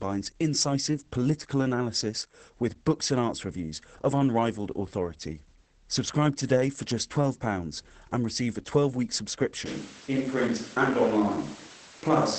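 From start to end, the speech carries Opus voice compression in its SILK mode. The sound is muffled, hoarse and slightly robotic, which fits a rate near 10 kbit/s. A spectrogram shows a hard ceiling with nothing above 8.8 kHz, and the harmonics below it are smeared and coarse.

At 9.66 s the tone changes abruptly to roomy and hollow, with thinner bass, and stays that way to the end. This is likely a switch to a distant microphone. The waveform holds roughly the same height, but pauses fill with reverberant tails and room noise about 25 dB below the speech.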